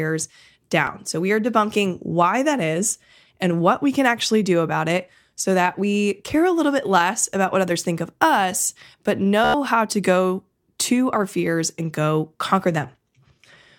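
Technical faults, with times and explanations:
0.87 s: Bluetooth stutter. A quick blip where roughly 13 ms of audio went missing and the receiver filled the gap by replaying its last little slice. It's so short it reads as a tiny tick or catch rather than a full buzz, and the speech jumps ahead as though it had kept playing.
9.45 to 9.54 s: Bluetooth stutter again, and much more obvious. Right after "think of us but", about 93 ms drops out, which fits around seven lost packets in a row. The receiver loops the same short fragment over and over, so you get a brief machine-gun buzz before the speech picks up at "how to go to", with the missing stretch simply skipped.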